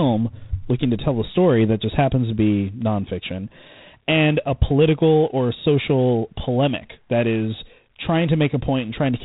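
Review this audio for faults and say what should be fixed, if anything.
Throughout, the speech carries G.726 ADPCM damage: a harsh, rasping hiss that rises and falls with the speech level, and nothing above 3.8 kHz. The coarse difference coding fits 24 kbit/s. Unlike steady background noise, this hiss drops in pauses. Prevent it by using 32 kbit/s or a wideband codec.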